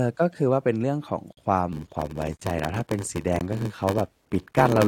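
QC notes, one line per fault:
1.33–1.37 s, 2.37–2.39 s, 3.39 s: gap between stream segments. Hard-edged silences of 46, 24 and 15 ms, spaced about a second apart, with no sound lost.
1.72–4.88 s: block size mismatch (padded). Every block is zero-padded, producing a 93.8 Hz buzz. The speech runs at 0.861 speed with unchanged timbre, which fits a 512-sample read block.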